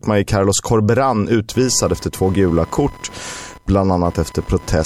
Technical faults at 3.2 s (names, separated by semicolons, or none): computer activity noise